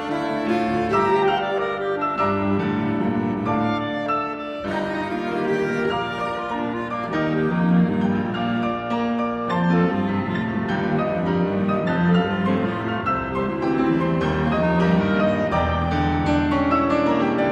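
Nothing here calls for comment, since no technical faults turn up anywhere in the recording.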